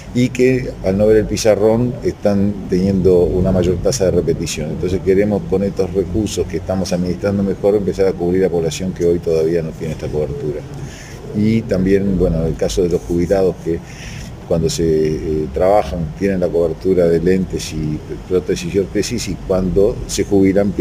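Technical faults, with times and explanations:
Throughout, crude rate conversion: samples get repeated instead of filtered, which fits a 44.1 to 48 kHz change, leaving gritty inharmonic fizz roughly 30 dB down.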